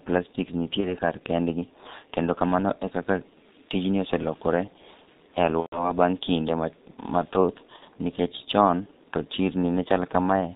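The whole clip runs through the G.723.1 codec, and the damage is heavy. Nothing comes through above 4 kHz, so the speech sounds muffled and hoarse, with smeared consonants. That fits the low 6.3 kbit/s mode, where the coarse 30 ms frames can't keep up with the voice.

There are also three bursts of VoIP packet loss concealed by the speech codec. From 0.80 to 0.97 s, just before "kar kendgi", the sound smears into a short tail, which fits about 30 ms of lost audio. From 5.60 to 5.93 s, just before "baang' kinde", a longer stretch fades and then cuts out, pointing to roughly 120 ms missing. From 7.76 to 7.84 s there's a brief blur, consistent with about 60 ms gone. Each time the decoder keeps extending its last pitch and filter while turning the level down, and the voice stays weak for a moment after the packets come back.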